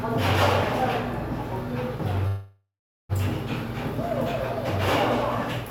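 A call audio freeze runs from 2.27 to 3.12 s in this recording of sounds: the last sound stretches into a fading buzz or hiss, then 0.4 s of silence, before resuming exactly where it stopped, likely because delayed packets drained the jitter buffer, leaving everything afterwards about 0.82 s late.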